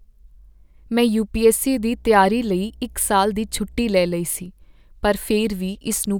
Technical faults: mains hum

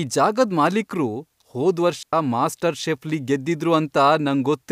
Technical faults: digital wireless dropout

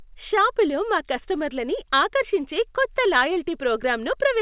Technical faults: none

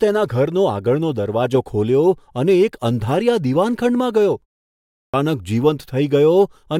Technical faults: clipped start after a pause

